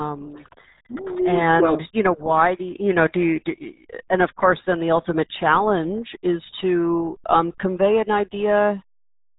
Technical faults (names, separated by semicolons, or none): RealAudio 14.4 codec